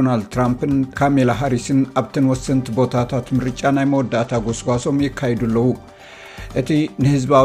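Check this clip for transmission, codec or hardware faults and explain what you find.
One fault stands out: a Bluetooth SBC bit pool drop from 3.87 s to 4.89 s, about one second. The link appears to have become congested, and the sending device cut the SBC bit pool sharply, consistent with a fall from a typical value around 31 to about 12, near 88 kbps. Starved of bits, the encoder gives the highest sub-bands little or nothing and quantises the rest coarsely. The treble goes dull and a gritty grain rises, clearing once the rate recovers.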